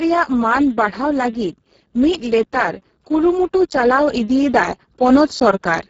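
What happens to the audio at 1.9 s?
At 1.9 s you're hearing Speex codec damage, which runs through the whole clip. Starved of excitation bits, the speech turns noisy and hoarse, which points to roughly 6 kbps, with nothing above 7.7 kHz.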